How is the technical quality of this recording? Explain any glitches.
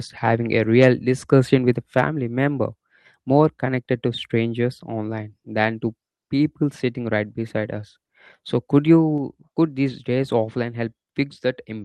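The speech carries one glitch, heard over call-codec audio whose top end stops near 12 kHz. At 9.18 s, just before "could these days offline", the level drops abruptly by about 3 dB, likely a microphone volume stepped down by the call software's automatic input-gain control.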